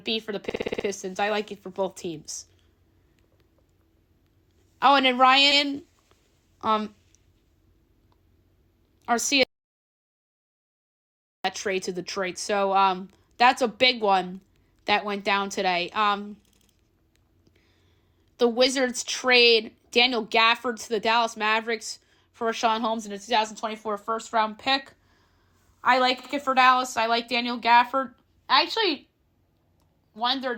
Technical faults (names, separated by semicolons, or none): repeated frames; audio dropout to silence